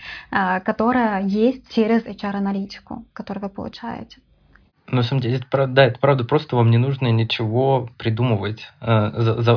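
A recording of speech. Listening through it turns up no technical fault at any point.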